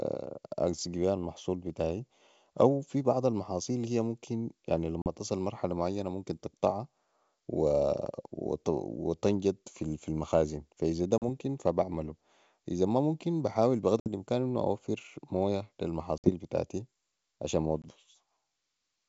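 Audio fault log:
5.02–5.07, 11.18–11.23, 14.00–14.08, 16.18–16.30 and 17.82–17.85 s: packet loss on an ADPCM call. Gaps of 20 to 60 ms are filled with silence. The decoder's predictor and step size then drift from the sender's, so the speech returns briefly mis-levelled or distorted.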